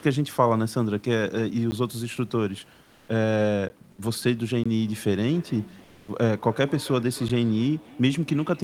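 Blocks of digital silence occur at 1.71 s, 3.69 s, 4.64 to 4.66 s and 7.29 s. Each drops the signal to silence for 10 ms, about 15 ms, 20 ms and 10 ms respectively, then snaps back with no fade. The hard edges give a tick at the shortest gaps and a small pop with a brief hole at the 20 ms one. This most often happens when the output buffer is not filled in time and zeros go out instead.

Comfort noise in place of the background appears from 2.84 to 3.08 s and again from 5.84 to 6.08 s, each lasting 240 ms. In those pauses the room's real background, otherwise about 34 dB below the speech, gives way to a smooth, featureless hiss. The first stretch sits at the same level as the real background, and the second dips about 3 dB. The likely cause is discontinuous transmission: the sender stops sending during silence and the receiver synthesises noise to fill the gap.

Feedback echo between two devices begins at 4.87 s and runs to the end of the clip. 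Each phrase returns roughly a third of a second later, thinner and ringier, at its loudest about 21 dB below the speech. This happens when a second device in the same room replays the call and its sound reaches the first microphone again. Neither device's echo canceller removes audio played by the other, so the repeats pass straight through.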